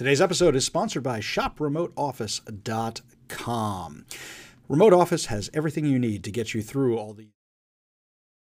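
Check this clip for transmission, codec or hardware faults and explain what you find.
Nothing stood out on listening, and the gentle fade-out that ends by about 7.4 s is a deliberate edit rather than a problem.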